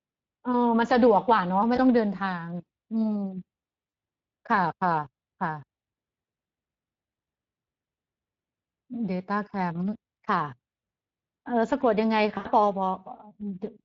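It's a speech clip with plainly audible Speex codec damage throughout: hoarse, noisy coding that fits a mid setting of around 20 kbps. There's also VoIP packet loss concealed by the speech codec at 1.75, 3.89 and 12.37 s. The decoder stretches the last sound into a fading buzz or coloured noise, with gaps of roughly one, two and four 20 ms frames.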